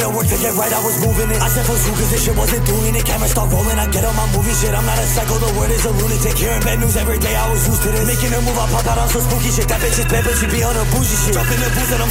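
No technical fault can be heard anywhere in this audio. Nothing in the recording or playback chain calls attention to itself at any point.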